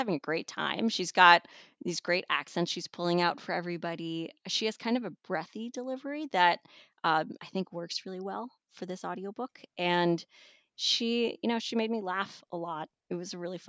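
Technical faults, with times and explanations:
No technical faults are audible anywhere in this speech recording.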